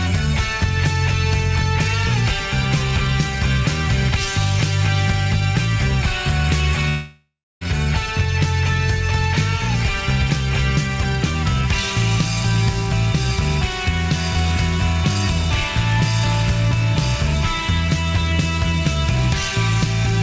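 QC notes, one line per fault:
6.89–7.64 s, long network dropout: a stretch of about 720 ms of audio was likely lost in transit, so the receiver had nothing to play and filled the gap by stretching the last sound it had into a buzz or hiss that fades away. The final 280 ms are silence before the audio returns at 7.64 s, with the missing portion simply gone. Like the rest of the G.722 call audio, nothing is heard above 8 kHz.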